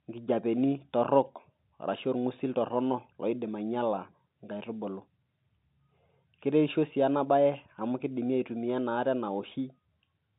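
Listening to this speech recording, carried over G.711 telephone coding with its narrow line band that leaves nothing above about 3.8 kHz, nothing stood out as a problem.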